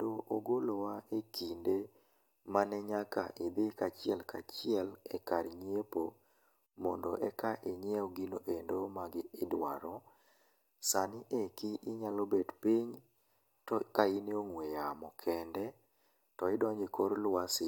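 No technical faults are audible anywhere in the speech recording.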